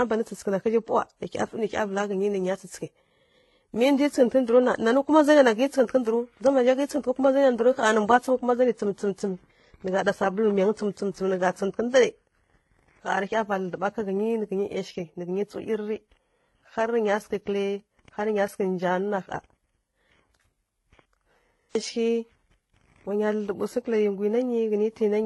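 Throughout, the speech carries stacked compression artefacts and nothing above 11.8 kHz. This is likely transcoding between lossy codecs, pointing to low-bitrate HE-AAC smearing beneath a later WMA pass.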